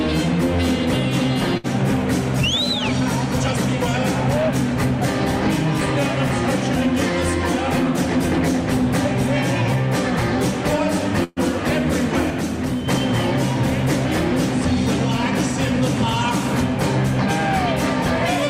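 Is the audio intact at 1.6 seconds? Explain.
No, a burst of packet loss runs from 1.57 to 1.67 s: the receiver fills 64 ms by holding the last sound as it fades, and 60 ms of audio is lost.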